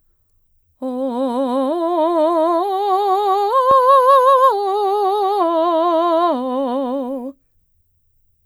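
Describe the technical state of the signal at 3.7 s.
A loud pop sits at 3.71 to 3.73 s, a single sharp click roughly 10 dB above the music, which carries on beneath it. It is likely a sudden voltage step or pulse entering the signal path, such as a plug, switch or static discharge.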